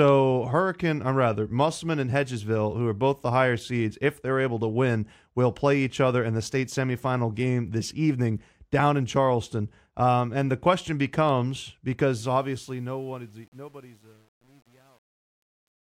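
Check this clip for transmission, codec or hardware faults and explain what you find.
One fault, at the tail of this speech clip. Truncation distortion on a fade runs from 12.21 s, just after "and the question becomes", to the end at 15.98 s. The volume stage keeps too few bits and applies no dither, which fits a stage holding about 9 bits. As the gain drops, the waveform turns into coarse steps. From 12.97 s onward the quiet tail sounds gritty.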